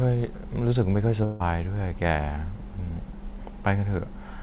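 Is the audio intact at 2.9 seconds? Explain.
Yes, the speech at 2.9 seconds is intact, with no dropout, glitch or distortion at that moment, only the narrow telephone-style band of the call path, which carries nothing above 4 kHz.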